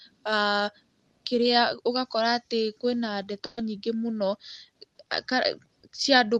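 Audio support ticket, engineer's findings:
Burst of packet loss at 3.45–3.59 s: 120 ms concealed by stretched, fading sound rather than silence, then a skip ahead. Jitter buffer concealment in the call path, not a plain dropout.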